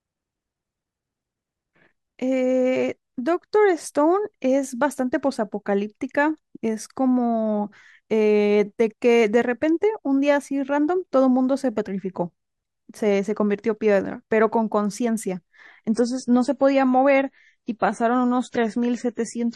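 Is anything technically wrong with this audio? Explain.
Yes. An adaptive stream at a lower bitrate runs from 15.91 s to the end: the connection slowed and the player switched down, which fits a drop from 128 to 32 kbit/s MP3. The speech abruptly loses everything above 10.5 kHz and grows grainier, with no gap.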